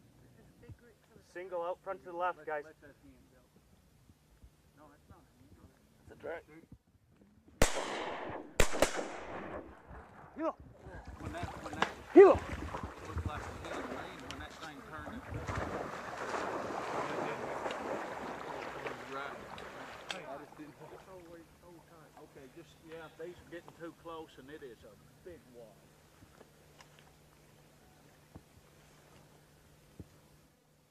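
At 12.8 s the level drops abruptly by about 4 dB and stays down until 12.97 s, a sudden gain jump lasting roughly 0.17 s. The sound and the background noise fall together, which points to a digital gain change applied between one sample and the next, likely a setting or bit shift switched without a ramp. On the waveform the envelope steps down and back up with hard vertical edges. On a spectrogram every frequency band darkens evenly across that short stretch.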